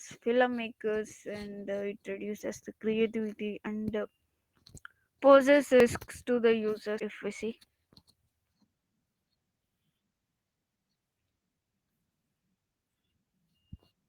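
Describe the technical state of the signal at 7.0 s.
Right at 7.00 s, between "to the" and "if we see", the speech jumps forward with no gap of silence. Something like 150 ms just isn't there, and the two sides butt straight up against each other. That's the signature of a dropped buffer (overrun), likely from the recording software not pulling samples off the hardware in time, so the device wrote over that chunk before it was saved.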